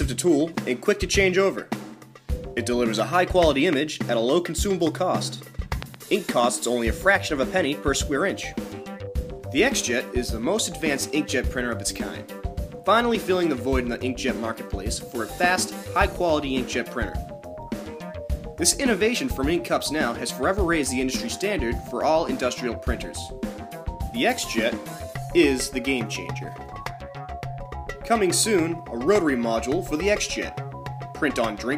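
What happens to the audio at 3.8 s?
A single loud pop lands at 3.73 to 3.75 s, just before the moment asked. It is sharp and brief, well above the surrounding level, while the audio carries on underneath. A sudden voltage step, likely from a plug, switch or static discharge, caused it.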